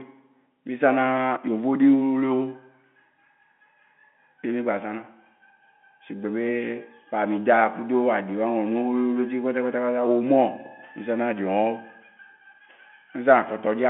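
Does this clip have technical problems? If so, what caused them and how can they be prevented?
No, the speech sits in the narrow 200 Hz to 3.4 kHz band of an ordinary phone line, as expected from G.711 telephone coding working as designed, and nothing in the signal points to a technical problem.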